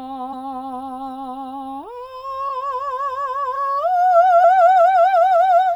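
Music with compressed frames skipped at 0.32, 2.48, 3.55 to 3.57 and 4.43 s. Each time the music lurches forward, losing about a fifth, 0.15, half and two-fifths of a second.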